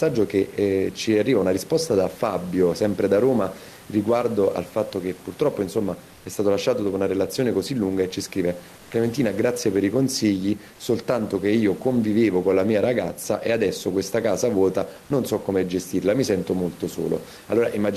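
Gain pumping runs through the whole clip. The room background sits about 27 dB below the speech. The swing is roughly 5 dB. The likely cause is input gain set far too high, with a fast limiter clamping every peak.

From 6.13 to 6.25 s, comfort noise replaces the background. For 120 ms the real room sound gives way to a smooth, featureless hiss at the same level. The sender has likely paused transmission in a silent stretch, as Opus DTX does, and the receiver filled the gap with synthetic noise.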